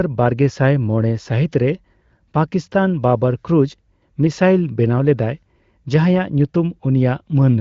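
Nothing stood out on listening to this speech recording, which carries the band-limited character of an AMR wideband (HD Voice) call.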